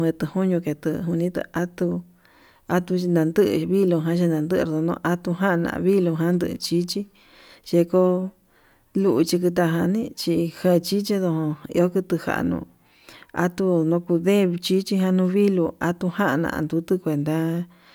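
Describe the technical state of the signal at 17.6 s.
At 17.6 s the speech signal is intact, with no audible technical fault at that moment.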